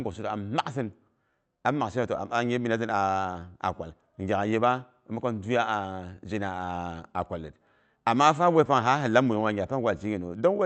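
Clock drift between sender and receiver runs through the whole speech clip: the sending side's clock is slow, by roughly 2 percent, so audio arrives a little behind the rate at which the receiver plays it out. The jitter buffer keeps drifting toward empty, and the receiver has to stretch the stream to avoid running dry. Heard through what sounds like an Opus call path, band-limited near 8 kHz, the result is a faint, uneven looseness in timing rather than any single obvious break.

Repeated timing corrections appear from 0.12 s to 10.30 s. To compensate for the slow sender, the receiver keeps repeating short slices of audio, always in the same direction, so playback runs at about 98 percent of the original pace and roughly 0.3 s is added across the stretch. The insertions are small and irregularly spaced. They come through as slight hiccups and a tempo that wavers unevenly.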